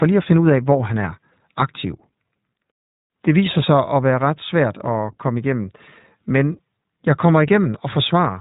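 Throughout, the speech passes through the iLBC codec, consistent with its 20 ms frame mode, stripping everything above 3.8 kHz and leaving plainly audible roughness and a slightly synthetic edge.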